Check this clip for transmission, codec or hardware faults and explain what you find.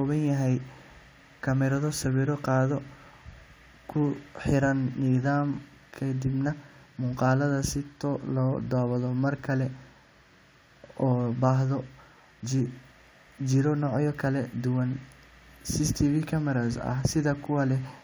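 Nothing faulty can be heard anywhere in this recording.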